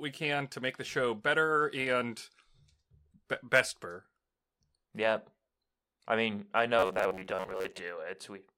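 Speech with robotic sound from repeated short buffers between 6.79 and 7.79 s: a rigid 93.8 Hz metallic buzz, likely from an 11 ms block looped over about half the time.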